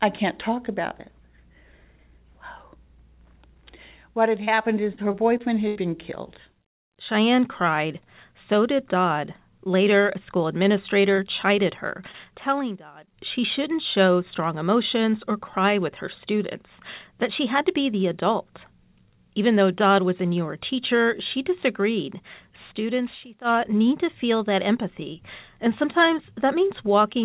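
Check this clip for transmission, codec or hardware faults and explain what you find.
Three kinds of fault appear: a burst of repeated packet loss, two brief concealed dropouts, and two episodes of loudspeaker feedback squeal.

Repeated packet loss (robotic sound), 4.44 to 5.77 s, ending just before "been killed": the network dropped or delayed audio six times in quick succession, and the receiver filled each hole by extending the preceding sound. About 16 percent of the stretch is synthetic fill, the longest gap 79 ms. The speech turns choppy and mechanical, with fragments smeared or missing.

Short concealed packet loss, at 11.15 s and 12.12 s: each time about 20 ms of audio failed to arrive, and the decoder bridged it by continuing the last waveform before crossfading back. The second falls inside the first squeal. Each is a brief smear or wobble rather than an audible gap.

Loudspeaker feedback squeal, 11.30 to 13.34 s, ending before "shouldn't show strong emotions", and 21.27 to 23.76 s, between "was a newer teacher" and "to feel that empathy": a microphone picked up its own loudspeaker, and at 4.9 kHz the loop gain passed unity. 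That tone swells over roughly one and a half to two seconds to a few decibels above the speech, a squealing tone riding over the talker.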